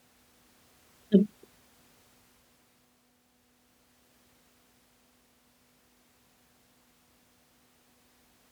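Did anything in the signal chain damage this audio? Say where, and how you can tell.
No, nothing in the chain audibly damaged this speech recording, and no stage from capture to playback leaves a mark that can be heard.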